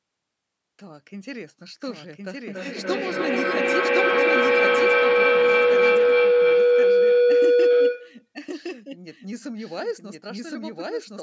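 A doubled audio track runs throughout the speech, most likely because a second, slower capture path or an edit mixed the same audio in twice. A full-band copy trails by about a second at roughly the original's level, dry and without room colour, so everything sounds twice.

From 2.46 to 8.33 s a feedback howl takes over: two devices in one room were on the same call, and the microphone-to-loudspeaker loop gained level on each trip. A tone near 500 Hz builds, repeating about every 300 ms, reaching about 12 dB above the speech.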